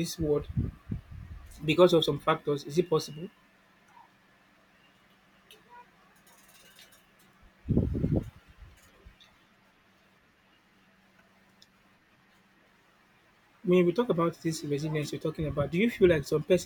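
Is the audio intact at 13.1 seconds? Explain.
Yes, at 13.1 seconds the speech plays through cleanly, with no dropout, click, distortion or other fault at that moment.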